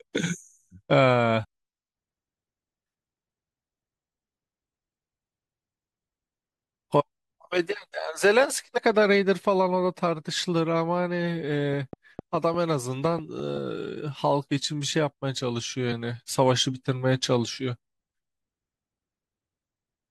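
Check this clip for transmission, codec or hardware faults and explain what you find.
Two brief faults show up in this speech clip, both damaged data in a compressed stream, at 1.43–1.45 s and 8.77–8.79 s. Corrupted bytes throw the decoder out of sync until it finds the next frame header, leaving a short chirp or blip. On a spectrogram each is a thin broadband vertical streak, and on the waveform a 20 ms glitch.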